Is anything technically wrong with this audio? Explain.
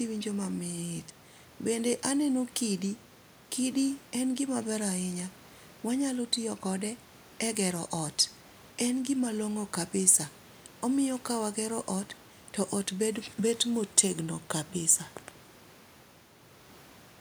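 No, the signal shows no technical faults anywhere in the recording.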